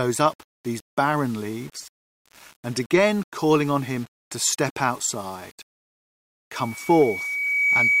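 From the start, the whole clip has a grainy distortion that moves with the sound. Quiet passages turn gritty. The error sits only about 30 dB below the signal. The likely cause is low bit depth without dither, with values rounded to roughly 7 bits.

At 6.54 s, a loudspeaker feedback squeal begins. A single 2.3 kHz tone swells over about a second until it is louder than the sound itself. It continues to the end. The microphone is picking up its own loudspeaker, and the loop gain exceeds one at that frequency.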